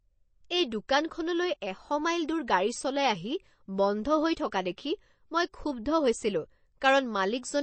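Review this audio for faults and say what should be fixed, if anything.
Throughout the speech there is a plainly audible watery, swirling texture, and nothing is present above 8.3 kHz. This is likely MP3 compression at a bitrate starved enough, fitting roughly 32 kbps, that the encoder cut the treble and left weak frequency components flickering between frames. Encoding from the original source at a higher bitrate, or using a lossless format, would prevent it.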